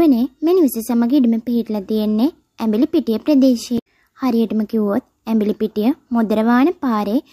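From 3.75 to 3.87 s, damaged data in the compressed stream throws the decoder out of sync, causing a brief glitch.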